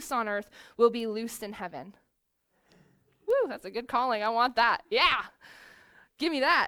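At 1.00 s, right after "on earth will", there's a bit error spike: one sample jumps by a power of two and snaps back, peaking around -28 dBFS, so you get a dry tick. Another hits at 3.30 s, just before "that's a good calling", louder at about -22 dBFS.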